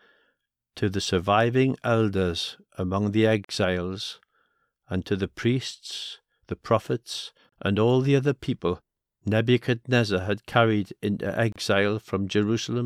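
The speech was encoded as separate pieces about every 4.0 s and joined without trimming each run's start-up delay and end padding, leaving a gap at a join of encoded pieces. Silence drops into continuous speech at 3.45–3.49 s (about 47 ms, after "surviving elders among the"), 7.49–7.52 s (32 ms, between "the priests the prophets" and "and all the other") and 11.52–11.56 s (32 ms, after "had carried into"), with smeared edges before the speech resumes.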